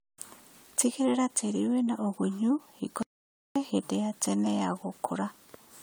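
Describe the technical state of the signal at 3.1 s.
At 3.1 s the input was likely lost, probably a disconnected device or failed link, so silence was written from 3.03 to 3.56 s. This audio dropout to silence cuts the speech off dead after "tĩri wĩna ũgunyu hingo" for 530 ms of total silence with no room tone until "hĩndĩ ya tene ya". Under this, generation loss, likely from about seven passes through AAC-LC at 96 kbit/s, leaves the surrounding speech swirly, smeared and hollow, with blurred attacks.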